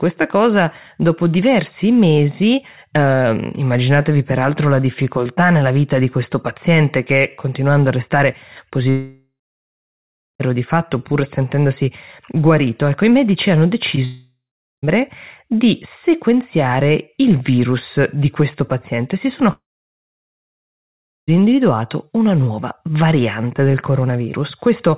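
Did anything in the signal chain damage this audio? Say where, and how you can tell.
Yes, the damage comes from the network stage. There are three long network dropouts: 8.9 to 10.42 s, 14.05 to 14.85 s, and 19.53 to 21.3 s, losing about 1.5 s, 0.78 s and 1.76 s. Each begins with the last sound stretched into a fading buzz, then silence (about 1.07 s, 0.43 s and 1.67 s). Speech resumes later with the gap's content simply gone, which points to a stalled stream, likely from the network, rather than a local mute or recording cut.

A separate short concealed packet loss sits at 13.96 to 13.99 s, just before the second dropout. About 20 ms never reached the decoder, and the receiver papered over it by extending the preceding sound before blending back. It is heard as a quick smear or wobble with no silence after it. That separates it from the dropouts, where concealment gives out and leaves a clear hole. 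The G.711 call path underneath keeps everything below 4 kHz.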